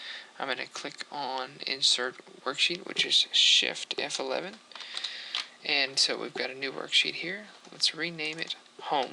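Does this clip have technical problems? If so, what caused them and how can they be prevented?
Yes. Clock drift buffer slips cause regular clicks every 2.28 s from 0.75 to 7.61 s. They are likely from unsynchronised clocks, each dropping or repeating a few samples. On a spectrogram they appear as thin vertical broadband lines. Lock both devices to one shared word clock.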